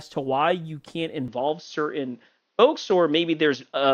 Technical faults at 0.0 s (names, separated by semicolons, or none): none